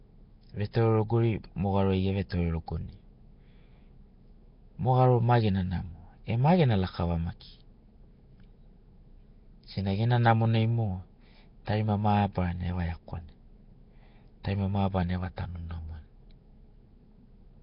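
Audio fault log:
throughout, Nellymoser compression: the speech was likely encoded with the Nellymoser Asao codec at a rate that fits about 22 kbps. Starved bands are filled with noise and nothing survives above 5.3 kHz, giving heavy damage: a rough, hissy halo and a smeared, underwater sound.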